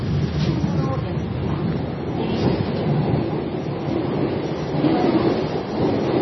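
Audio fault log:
Throughout: MP3 compression, heavy, likely from a low bitrate near 22 kbps. Weak components flicker frame to frame, giving a watery swirl. A spectrogram shows patchy, speckled gaps.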